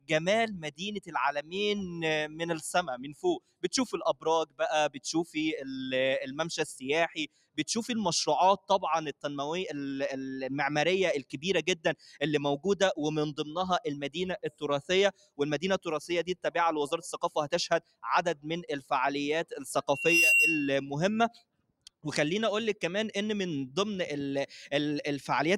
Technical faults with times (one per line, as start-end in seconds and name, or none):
0.00-25.58 noise suppressor applied to music or sounds
0.00-2.41 sound cut by the noise suppressor
2.97-5.36 sound cut by the noise suppressor
7.27-7.61 sound cut by the noise suppressor
8.58-9.24 sound cut by the noise suppressor
11.23-12.21 sound cut by the noise suppressor
14.08-16.48 sound cut by the noise suppressor
17.26-18.91 sound cut by the noise suppressor
19.89-20.85 loudspeaker feedback squeal
21.30-22.05 sound cut by the noise suppressor